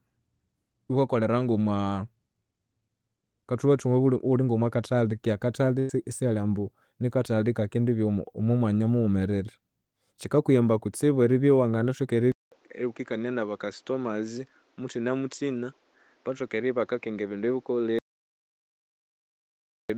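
At 5.79 s, for about 0.12 s, there is a burst of packet loss. Roughly 100 ms of the stream never arrived, and the receiver covered the hole by stretching the last sound it had, fading it as the gap went on, before the speech resumes at "isihali ambu nikathali". What separates this from a dropout is the fill: you hear a brief smeared continuation rather than dead silence, and the speech picks up further along with a slice skipped.

At 12.32 s, right after "kutsibu eribya iwanginathoka", the input switched to a poorer device. There is a 200 ms silence at the switch, and from then to the end the speech is duller, with nothing above 7.6 kHz, about 5 dB quieter, and carrying a new background noise roughly 35 dB under the speech. The change arrives all at once and stays, with a different noise floor as well as a narrower band, which points to a change of microphone or headset profile rather than a filter applied to the same device.

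From 17.99 s to 19.90 s, inside that degraded stretch, comes an audio dropout to silence lasting 1.91 s. The signal falls to silence with no room tone or hiss underneath, unlike the concealed packet gap earlier, and the speech in between is simply gone. A lost input is the likely cause, with the recorder continuing to write empty samples until it returned.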